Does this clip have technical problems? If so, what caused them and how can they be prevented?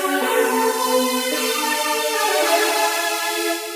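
Yes. The whole clip has a wrong sample rate fault. It runs about 1.45 times too fast and sits about 6.45 semitones high, which fits audio recorded at 22 kHz being played back at 32 kHz with no conversion. Speed and pitch have shifted together by the same ratio, and that is what separates this from a pitch-shift or time-stretch error, where only one of the two changes. Resampling to the playback device's rate, or tagging the file with its true rate, prevents it.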